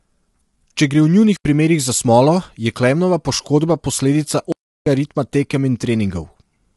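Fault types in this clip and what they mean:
Low-delay AAC compression: The speech sounds rough and grainy throughout, with noise filling the gaps between harmonics. Nothing is heard above 11.7 kHz. This is likely AAC-ELD, the short-frame codec of video calls, at a low rate that fits about 32 kbps.
Block of digital silence: The audio cuts to silence and returns with no fade. The first hole runs from 1.37 to 1.45 s and lasts 85 ms. The second runs from 4.52 to 4.86 s and lasts 341 ms.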